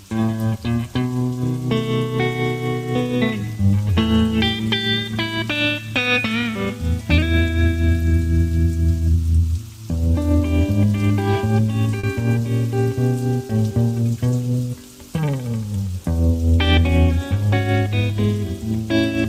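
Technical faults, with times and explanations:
11.99–12.05 s and 13.47–13.51 s: short concealed packet loss. 40 ms, then 20 ms, were rebuilt from preceding sound, leaving smeared, stretched spectrogram patches and a brief wobble.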